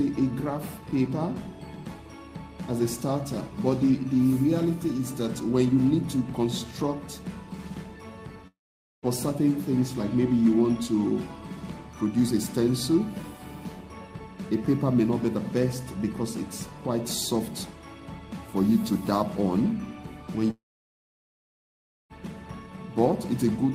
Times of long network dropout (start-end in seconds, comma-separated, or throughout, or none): 8.47-9.05, 20.50-22.12